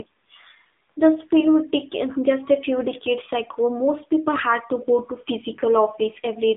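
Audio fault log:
Throughout, AMR narrowband mobile codec: the speech sounds thin, boxed in between 200 Hz and 3.7 kHz, and plainly buzzy and synthetic. The phone-band coder rebuilds the voice from a vocal-tract model and sparse pulses, and the coarseness fits a low 7.4 kbps mode.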